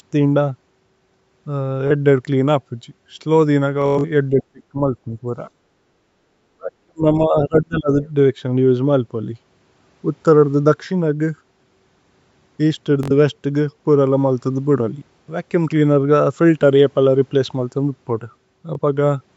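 Speech recorded over a call, with four kinds of fault. Bluetooth stutter hits at 1.88–1.91 s, 3.82–4.05 s, 13.03–13.11 s and 18.75–18.79 s, where lost packets make slices of about 21 ms repeat as a brief buzz. The 3.82 s burst is worst, with a run lasting about 107 ms. Between 4.29 and 5.24 s, and again from 6.55 to 7.95 s, the voice dips by roughly 30 to 35 dB in pieces, likely speech suppressed in double talk by the echo canceller. From 5.51 to 6.27 s the room sound drops by about 10 dB, the background gated by the echo canceller. At 8.02–8.09 s a faint scrap of another voice, roughly 25 dB below the talker, suggests the other side's voice leaking through.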